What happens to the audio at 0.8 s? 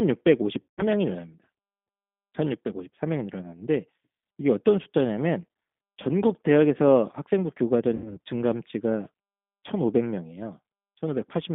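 At 0.8 s the sound is near the end of a stretch from 0.62 to 0.83 s where it smears into a held sound that weakens as it goes, then comes back thin and distorted. This is VoIP packet loss concealed by the speech codec. With packets missing, the decoder kept repeating its last pitch and vocal tract filter at falling gain, which fits about 160 ms of lost audio. Because each frame is predicted from the one before, the damage lingers briefly after packets resume, which is why the disturbance outlasts the gap.

Underneath, the audio has the rough, slightly synthetic, narrowband character of the G.729 codec, with the line limited to about 200 Hz to 3.6 kHz. At 8 kbit/s the speech is rebuilt from a vocal tract filter, a pitch predictor and a few pulses per frame rather than carried as a waveform, and that coding damage is plainly audible here and throughout.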